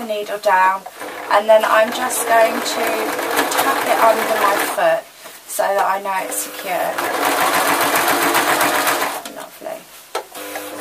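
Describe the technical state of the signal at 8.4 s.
At 8.4 s the signal is intact, with no dropout, distortion, glitch or other audible fault at that moment.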